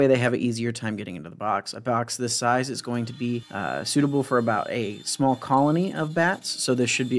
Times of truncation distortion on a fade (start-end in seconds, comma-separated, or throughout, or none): none